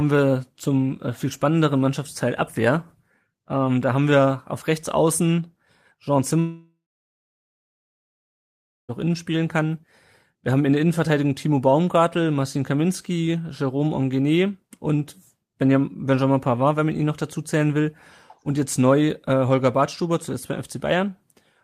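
At 6.39 s the speech collapses into a fading buzz, then about 2.1 s of silence until 8.91 s, likely a long network dropout; that span never returns.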